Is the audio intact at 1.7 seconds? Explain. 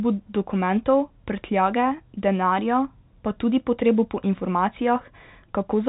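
Yes, the audio is intact at 1.7 seconds, with the speech carried cleanly through G.711 telephone coding, which leaves nothing above about 3.8 kHz.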